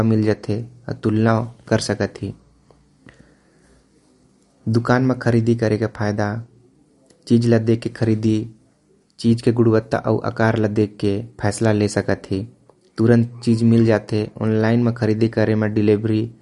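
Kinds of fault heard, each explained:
MP3 compression: The speech stops dead at 11.2 kHz and carries a plainly audible watery, swirling texture from start to finish, with s sounds turning chirpy and consonant onsets smeared. This likely comes from an MP3 encode at a low bitrate, around 48 kbps, where the encoder drops the top band and lets quiet frequency lines flicker on and off between frames. A plain low-pass filter would dull the top similarly but leave no swirl.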